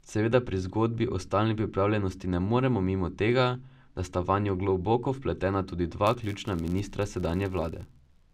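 A filter restarted on every block appears at 6.07 s, right after "vanjo globoko vpletena tudi", and lasts to the end at 8.33 s. Each block starts from silence, leaving a small transient, so the speech carries a level-following buzz near 93.8 Hz, which fits a 512-sample buffer.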